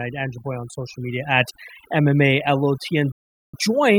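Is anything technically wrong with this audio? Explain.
Yes, two faults are present. Throughout the speech there is overdone noise removal. A noise reducer set too aggressively has pulled individual frequency bands down whenever they sat near its noise estimate. Quiet parts of the voice went with them, leaving a near-silent background with twinkling specks. A bandwidth-limited codec would dull the sound evenly instead.

From 3.12 to 3.54 s there is a digital broadcast dropout. The receiver lost valid frames and muted, fading out in about 3 ms. The roughly 416 ms of silence fits around thirteen lost frames. Unlike a concealed packet loss, nothing fills the hole, and the missing audio never returns.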